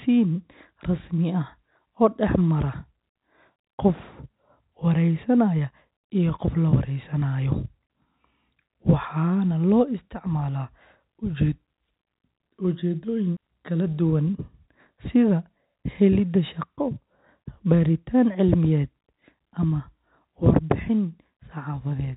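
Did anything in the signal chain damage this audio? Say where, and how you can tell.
No, nothing damaged it.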